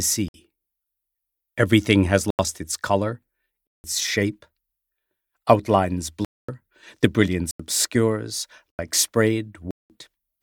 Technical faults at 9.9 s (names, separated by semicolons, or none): block of digital silence